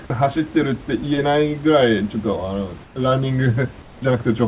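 At 2.84 to 2.96 s and again at 3.82 to 4.02 s, comfort noise in place of the background replaces the room hiss with a flat, featureless noise, about 5 dB then about 3 dB quieter, likely from discontinuous transmission. Unlike a dropout, the pause never goes silent.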